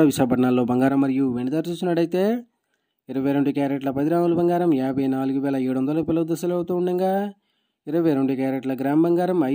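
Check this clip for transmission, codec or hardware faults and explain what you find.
One fault is present. From 0.89 s to the end, the sound drops abruptly by about 6 dB and stays there, which points to one channel dropping out, likely a lost stereo channel. Once the two channels are summed to mono, material shared by both loses half its contribution. Unlike a plain gain drop, the step is exactly 6 dB, and anything carried only in the missing channel vanishes instead of just getting quieter.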